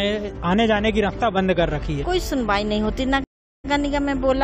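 Stream reconnect at 3.24 s: 400 ms of silence, then a fresh decoder resumes 46 ms earlier, repeating sound where a plain dropout would skip ahead.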